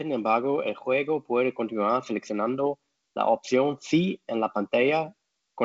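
No technical faults can be heard in this speech recording. It carries the sound of G.722 wideband telephone coding at 56 kbit/s, with nothing above 7.5 kHz and only a light layer of coding noise.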